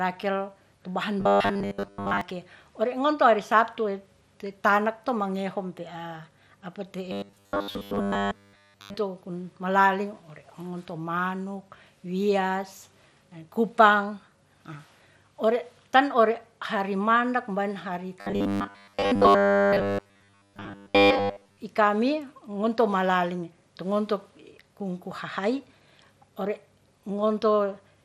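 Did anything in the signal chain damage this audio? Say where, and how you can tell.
Yes. MP2 compression runs through the whole clip: the codec stage left a dull, gurgling, granular texture as upper sub-bands drop out and the remaining bands are coarsely quantised. This likely comes from low-rate MPEG Layer II, fitting roughly 80 kbps.

Robotic sound from repeated short buffers appears at 1.20–2.21 s, 7.12–8.96 s (between "ya' apa" and "to kun malali") and 18.21–21.58 s. A rigid 100 Hz buzz points to a 10 ms slice being replayed, likely a driver or buffer starving, with most of the real audio skipped.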